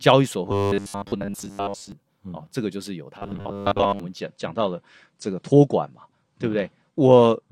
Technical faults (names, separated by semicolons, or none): robotic sound from repeated short buffers; adaptive stream at a lower bitrate